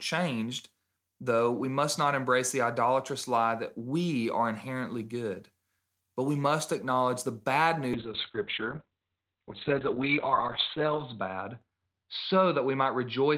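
At 7.95 s, after "must acknowledge the bad", a call bitrate drop starves the encoder, consistent with a fall from about 40 to 6 kbps. Bandwidth narrows from 20 kHz to 4 kHz, so the speech turns muffled and rough, bottoming out for 3.1 s without recovering.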